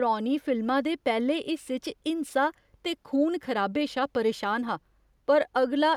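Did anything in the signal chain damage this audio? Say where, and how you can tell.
No, nothing in the signal chain audibly damaged this speech; the signal is continuous and intact, with no stage leaving a mark on it.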